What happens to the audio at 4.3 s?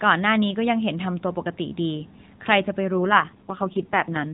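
At 4.3 s the speech is inside an AMR rate drop that starts at 2.96 s and runs to the end of the clip. The mobile link pushes the AMR-NB codec to a lower rate, leaving fewer bits for the pulse excitation in each 5 ms subframe. The bandwidth stays narrowband and nothing drops out, but the voice turns buzzy and synthetic, which fits a step down from 12.2 kbps to about 4.75 kbps.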